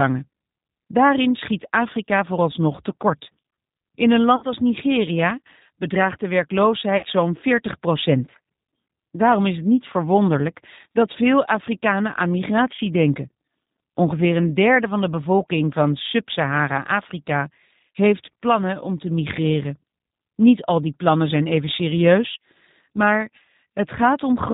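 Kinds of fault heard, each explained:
G.729 codec: The whole clip has that low-rate telephone-codec sound. The speech is rebuilt from a vocal tract filter and a pitch predictor plus a few pulses per frame, so everything above 4 kHz is gone and the voice comes across thin, a bit rough and synthetic. The damage is plainly audible throughout, and it fits a narrowband 8 kbit/s coder of the G.729A kind.
VoIP packet loss concealed by the speech codec: There are two short dropouts where audio went missing and the decoder filled the gap by stretching out its last pitch and filter, fading the level as it went. They fall at about 4.36 to 4.45 s and 6.97 to 7.07 s. Each lost stretch is around 60 ms, which fits roughly two packets. It sounds like a brief, smeared buzzy tone or coloured noise, and the voice stays weak or distorted for a moment after it resumes.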